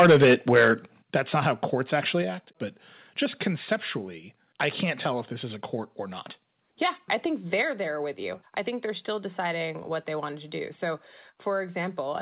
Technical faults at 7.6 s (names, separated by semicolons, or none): microphone volume stepped down